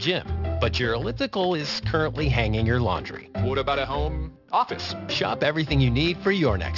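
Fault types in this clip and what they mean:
Aliasing: The sample rate dropped without filtering, which fits 12 kHz. Content above 6 kHz folds back throughout as gritty, metallic false tones, fairly strong.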